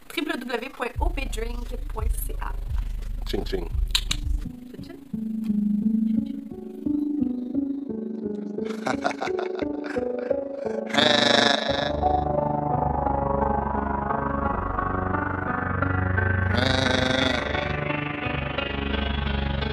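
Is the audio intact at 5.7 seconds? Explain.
No. At 5.7 seconds, as throughout, there is overlap-add ripple: frames rejoined with an overlap that doesn't sum evenly, so the level dips about 11 dB around 30 times a second. It sounds like a rough flutter, regular and unbroken, unlike random dropouts.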